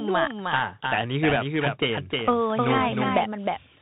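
From the start, the speech carries a doubled audio track: a second full-band copy, about 5 dB quieter, trails the original by roughly 300 ms with no reverberant tail, giving a dry, stuttering echo. It is likely the same signal being captured twice, once through a slower path.

Also present throughout is the Bluetooth CVSD headset codec, a narrowband one-bit delta modulation scheme whose sound fits a 64 kbps CVSD stream. Nothing above 4 kHz survives, sibilants turn scratchy, loud bright passages distort where the adaptive step cannot keep up, and a granular hiss sits underneath.

From 1.29 to 1.36 s, bit errors on the Bluetooth voice link add a brief rushing crackle. Flipped bits at a rate of a few percent each nudge the waveform by an amount that grows with the speech level and fade quickly, so the damage sounds like a burst of gritty noise rather than sharp clicks.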